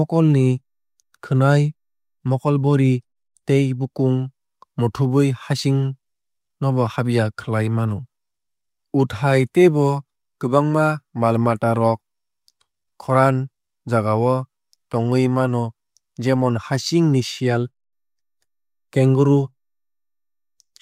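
No technical faults can be heard anywhere in the speech recording.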